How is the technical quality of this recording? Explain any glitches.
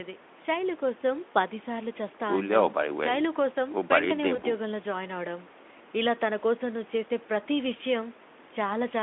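The recording has two brief glitches of VoIP packet loss concealed by the speech codec, at 4.35–4.41 s and 7.77–7.80 s, each consistent with one lost 20 ms frame. The Speex decoder extrapolated from its last pitch and filter, smearing the sound into a short buzzy or noise-like, fading stretch before recovering.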